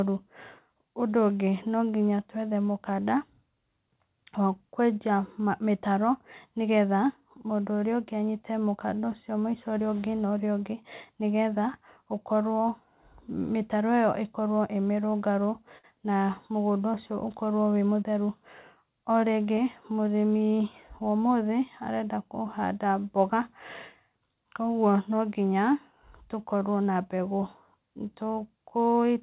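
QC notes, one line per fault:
15.78 to 15.85 s, short stall from a late packet: the last sound is held about 54 ms while the buffer waits, nothing lost, unlike a dropout's gap.
17.81 to 18.18 s, jitter buffer speed-up: pitch-period snippets trimmed, roughly 50 ms in all, so speech runs about 114% speed at unchanged pitch, hurried not chipmunky.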